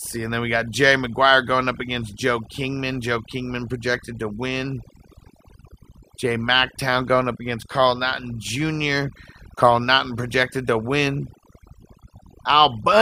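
Speech, and it's got overdone noise removal the whole way through. The noise reduction was pushed too hard, so any band sitting near its noise estimate gets pulled right down, taking quieter bits of the voice with it. That leaves near-silent gaps with twinkly specks.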